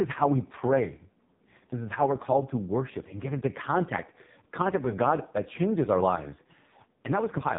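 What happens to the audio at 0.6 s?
AMR narrowband mobile codec damage is present at 0.6 s, as it is throughout the clip. The speech is rebuilt from a coarse vocal-tract model with few pulses per 5 ms, which fits the lowest 4.75 kbps mode, leaving nothing above 3.8 kHz and a heavily buzzy, synthetic tone.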